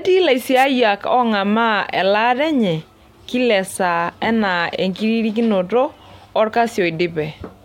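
At 0.55 s a wireless microphone noise hit breaks in and lasts about 100 ms, to 0.65 s. The radio link from an analogue FM transmitter faded briefly as reflected signals cancelled, so receiver noise rose over the speech and came through as a short swish of static. What separates it from a digital wireless dropout is that the speech is covered by hiss rather than cut to silence or frozen into a clipped, repeating fragment.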